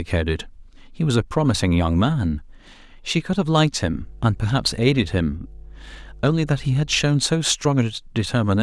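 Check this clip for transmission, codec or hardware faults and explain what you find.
There's one fault here: mains hum in the speech from about 3.8 to 7.1 s. A ground loop or nearby transformer is leaking the power line into the signal, giving a steady 50 Hz drone with low harmonics, sitting roughly 20 dB below the speech.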